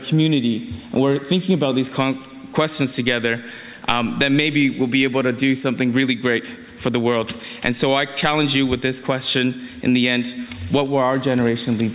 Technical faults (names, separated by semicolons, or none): none